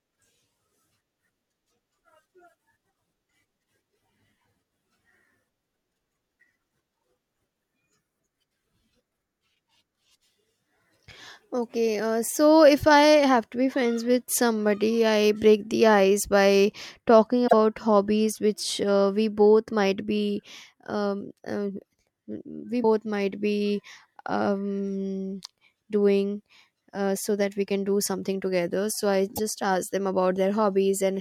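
A likely broken MP3 bit reservoir accounts for three brief disruptions in the speech, at 17.46 s, 22.82 s and 29.35 s. When frames are dropped from the stream, the next frame reaches back into the reservoir for data stored in earlier frames and finds bytes from a different frame instead. The sound skips forward and the first decoded frames come out garbled, for about 70 ms, 28 ms and 44 ms respectively. The frame length is roughly 26 ms.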